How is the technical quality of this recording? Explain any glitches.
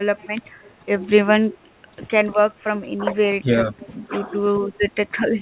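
The recording has two recurring call faults: a faint delayed echo and brief dips in the talker's level. The whole clip is band-limited to telephone bandwidth, with nothing above 4 kHz, consistent with G.711 mu-law at 64 kbps.

Echo leak appears at 0.18–0.27 s, 0.63–0.70 s and 3.79–3.89 s as a faint, delayed copy of the speech arriving about 429 ms late. It is very quiet, roughly 25 to 35 dB below the speech. This is likely residual loudspeaker pickup that the far end's echo canceller failed to remove. The fixed, long delay and the short scraps set it apart from room reverberation, which would trail off smoothly.

Speech suppressed in double talk shows up at 0.80–0.84 s, across 2.69–4.13 s (about half a second in total within that span) and at 4.80–4.86 s. In these places the talker's level sinks by around 10 to 15 dB. The likely cause is the echo canceller ducking both sides while they overlapped. 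Unlike packet-loss dropouts, these are level dips that follow the overlap rather than abrupt silences.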